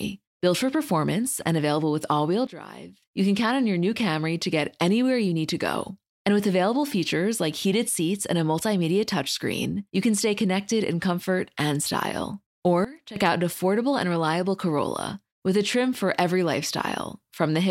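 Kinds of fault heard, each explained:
Sudden gain jump: Twice the speech and its background noise drop together in a single step, by about 14 dB from 2.47 to 3.02 s, after "available with all wheel" and before "you can count on", and by about 16 dB from 12.85 to 13.16 s, after "in comfort and style" and before "out an affordable and". Level then snaps back just as abruptly. The likely cause is a digital gain change applied between adjacent samples with no ramp.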